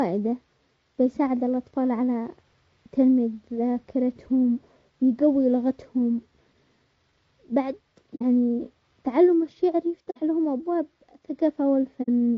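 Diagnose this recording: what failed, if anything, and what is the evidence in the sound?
Codec stage: the speech is rough and grainy throughout, with noise filling the gaps between harmonics and a thin, synthetic-sounding top band. The likely cause is low-delay AAC compression (AAC-ELD), at a rate consistent with about 32 kbps. On a spectrogram, harmonic stripes look smeared and the upper band is blotchy.

Codec or network stage, AAC frame loss with muting: short soft-edged holes at 8.15 to 8.23 s, 10.10 to 10.17 s and 12.02 to 12.09 s. Each gap consistent with about two lost frames zeroed by the decoder. The waveform tapers down and back up, and the spectrogram shows a clean vertical blank.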